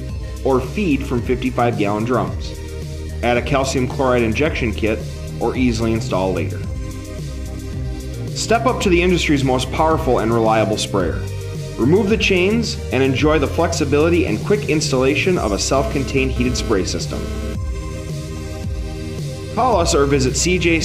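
From 15.76 to 17.55 s, GSM phone buzz: a nearby handset's 217 Hz data bursts are rectified by the audio circuit, giving a harsh harmonic rasp about 12 dB below the signal.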